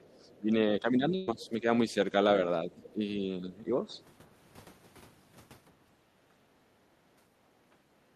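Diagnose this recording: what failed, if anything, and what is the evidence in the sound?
Speech suppressed in double talk, 0.00 to 2.14 s and again 2.65 to 3.96 s, points to the call-processing stage. The talker's level sags by up to about 10 dB in patches, roughly a second's worth in the first span and somewhat less in the second. This is likely the echo canceller being unable to tell the local talker from loudspeaker echo while both sides spoke, so it attenuated everything together.

The other side's voice leaking through appears in four short scraps: 0.09 to 0.36 s, 1.40 to 1.49 s, 2.84 to 2.90 s and 3.92 to 4.02 s. The fragments sit faint under the talker, about 35 dB down in the first and last and about 25 dB down in the middle two. They are most likely residual loudspeaker echo that the canceller failed to subtract from the microphone signal.

A burst of packet loss hits at 1.15 to 1.29 s, a network-stage fault. 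About 120 ms of audio never arrived. The receiver concealed it by extending the preceding sound for about 116 ms, fading it rather than dropping to silence, so a held, fading sound stands in for the missing material. When playback resumes, it picks up further along, with that stretch of the sentence simply gone.

Background gated by the echo canceller occurs at 6.02 to 6.23 s, again in call processing. The room tone drops by about 13 dB for around 200 ms, then comes back. While the far end's audio was playing out of the loudspeaker, the canceller clamped the microphone path hard. It released once the far-end signal eased, and that release restores the ambient level.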